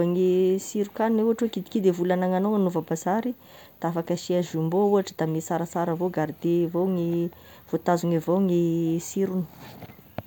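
From start to finish, the speech carries a block size mismatch with truncation. A low buzz at about 46.9 Hz runs under the whole clip. That rate fits blocks of 1024 samples. One stage writes blocks that are longer than the next stage reads. The tail of each block is cut off, so every boundary leaves a jump. Those regular jumps make the buzz. The speech keeps its normal pitch and its normal pace.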